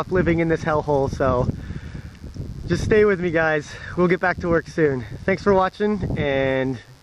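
A steady, raspy buzz sits well below the sound for the whole clip: mains buzz, switching spikes twice in every 50 Hz cycle feeding harmonics up into several kilohertz.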